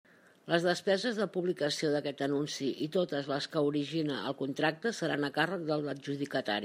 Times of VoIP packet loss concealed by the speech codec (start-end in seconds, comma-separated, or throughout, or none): none